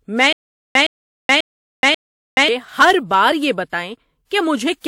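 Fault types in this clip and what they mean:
Transcoding between lossy codecs: The speech was likely encoded twice, first in one lossy format and then again in a second, with the later encoder wasting bits on the first one's artefacts and adding its own. Two layers of artefacts are heard together over a band-limited top, with nothing above 18.6 kHz. The character fits a WMA stream at around 96 kbit/s re-encoded to HE-AAC at around 48 kbit/s.
Stutter with silent gaps: The player likely stalled repeatedly, replaying its last buffered fragment at each retry and then running dry. From 0.33 s to 2.48 s, the same 114 ms burst of speech returns four times at a steady 540 ms period, each followed by about 426 ms of digital silence. The speech that should have filled those gaps is lost rather than delayed, giving a mechanical, choppy rhythm.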